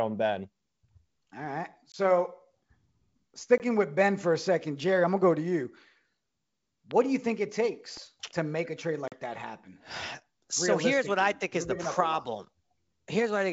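Speech carried over a G.722 wideband call, with its faint upper-band hiss, breaks up three times from packet loss on an ADPCM call: at 1.92–1.96 s, 3.58–3.62 s and 9.08–9.19 s. The first two gaps each drop about 20 ms, which fits one lost packet; the third drops about 40 ms, which fits two. Unlike a dropout, each hard-edged silence is followed by briefly distorted speech while the decoder's predictor resynchronises. A loud pop also sits on top of the speech at 6.91–6.93 s and again at 7.97–7.99 s, each about 10 dB above the sound, likely from a switch, plug or static discharge. Unlike the lost packets, the speech carries on unbroken beneath each pop.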